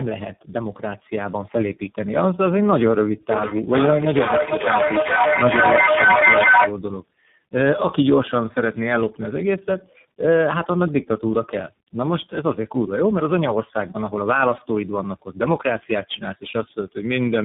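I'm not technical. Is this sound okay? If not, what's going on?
No. Throughout, the speech sounds muffled, rough and warbly, with nothing above about 3.8 kHz. That is tandem speech coding: the call passed through three different speech coders in a row, each squeezing audio that the previous one had already degraded.

From 3.31 to 6.82 s there is feedback echo between two devices. Two devices on the same call in one room pick up each other's playback, so the sound returns about every half second. The repeats get louder than the speech and pile up instead of fading.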